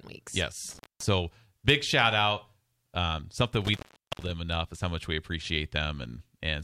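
A speech recording with two dropouts from an intermittent contact. From 0.69 to 1.08 s the sound breaks with crackle, then cuts out for about 216 ms, just before "big shout out". From 3.65 to 4.31 s it happens again, with a longer gap of about 427 ms, ending just before "enough is how much". A loose cable or plug is opening briefly. Crackle marks each edge, and faint hiss remains while the line is open.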